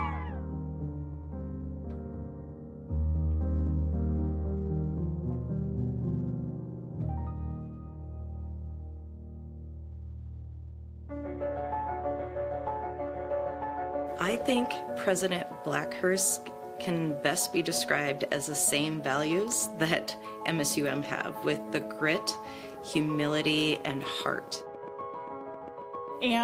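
A call bitrate drop runs from 9.89 to 15.37 s: the sound turns coarser and rougher, holding at its worst for about 4.7 s, which fits the encoder being pushed from roughly 32 kbps down to 18 kbps after the call's bandwidth estimate fell.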